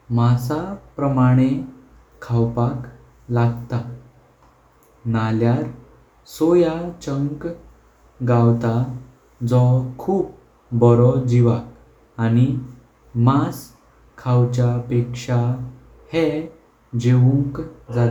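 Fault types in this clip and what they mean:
No fault types can be heard in this clip.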